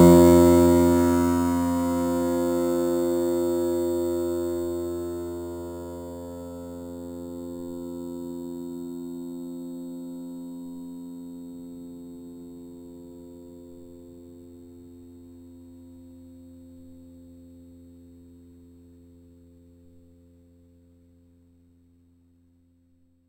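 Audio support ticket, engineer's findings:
Whole clip: imaging from sample-and-hold upsampling, 8 kHz to 48 kHz with no smoothing filter. Mirror images at 4 to 8 kHz, about 22 dB down, cause metallic fizz following level.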